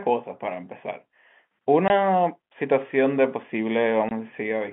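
Packet loss filled with silence strikes twice, at 1.88 to 1.90 s and again at 4.09 to 4.11 s. Each time, 20 ms of the speech simply vanishes, which fits two consecutive 10 ms packets failing to arrive and the receiver inserting silence in their place. The gaps start and stop abruptly, so each is heard as a tiny dropout in the narrowband, telephone-coded speech.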